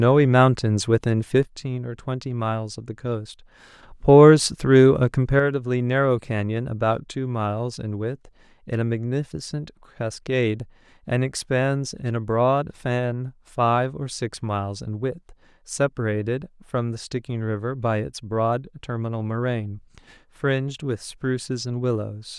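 At 1.43 s the speech suddenly drops by about 6 dB. It stays quieter until 3.83 s, then returns to full level. At 5.40 s it drops by the same amount again. This time it never recovers and stays low to the end of the clip. The likely cause is one channel dropping out. Once the two channels are summed to mono, the loss of one halves the shared content. That explains the abrupt, even step down in level.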